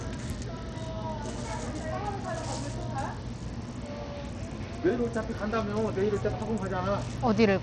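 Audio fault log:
throughout, Bluetooth SBC compression: the treble is thin and unstable, flickering in and out, while a gritty, grainy noise and metallic aliasing cling to the sound. This is likely SBC coding with a starved bit pool, which fits a low rate of around 80 kbps. Splitting the signal into a few wide bands with crude bit allocation leaves the weak upper bands with few or no bits, and everything else is coarsely quantised.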